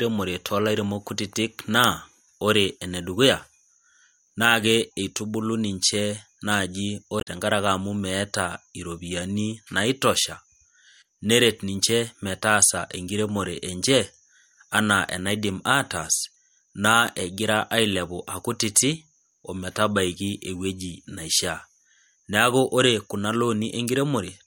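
Damaged data in a compressed stream occurs from 7.17 to 7.27 s. Corrupted bytes make the decoder misread those frames and lose sync while it hunts for the next valid frame header, so the speech breaks into a brief glitch lasting about a tenth of a second.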